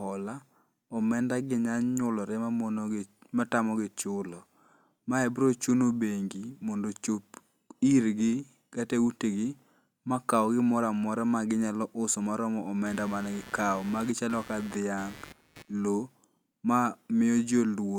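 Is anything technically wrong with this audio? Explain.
Yes. From 12.86 to 15.74 s, just after "ginyalo uso ma romo", there is computer activity noise: a buzzing, chirping pulse at around 150 Hz, roughly 20 dB below the speech. Changing load on the computer disturbs the shared audio ground, so the noise follows the machine's activity rather than the sound.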